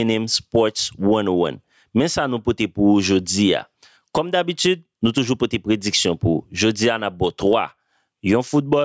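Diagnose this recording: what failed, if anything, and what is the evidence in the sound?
The fault is gain pumping, and it runs through the whole clip. The level swings by around 20 dB. Loud and quiet passages sit unnaturally close together, so everything sounds squashed. The likely cause is input gain set far too high for the mic, with a fast limiter or compressor clamping down on every peak. The call processing's top end stops at 8 kHz.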